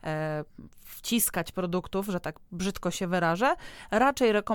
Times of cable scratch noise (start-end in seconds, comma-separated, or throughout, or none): none